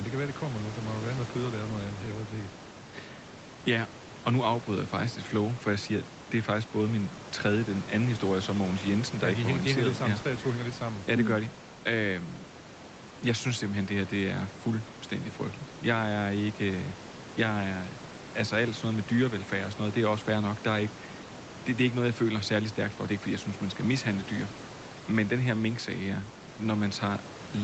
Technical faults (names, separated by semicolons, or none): none